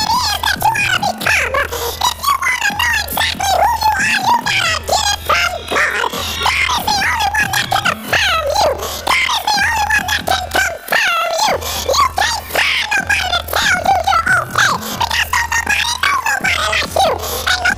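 Throughout, the audio sounds an octave high with a 21.5 Hz flutter, the classic planar audio read as interleaved fault, each roughly 46 ms block (which fits a 2048-sample block) playing twice at double speed.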